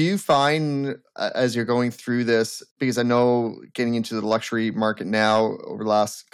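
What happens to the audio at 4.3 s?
Hard clipping from 4.31 to 4.35 s, just after "getting into the": peaks driven about 4 dB past the limit are cut flat, giving a brief harsh crackle.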